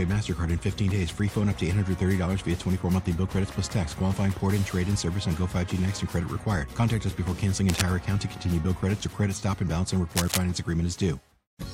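At 7.69 to 7.84 s and 10.15 to 10.42 s, cable scratch noise appears. Harsh rustling bursts sit just under the sound, likely from a worn connector shifting.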